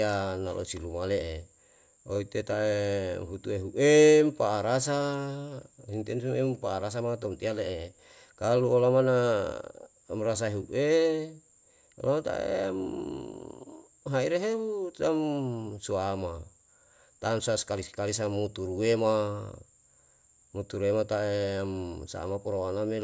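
No technical faults can be heard anywhere in the speech.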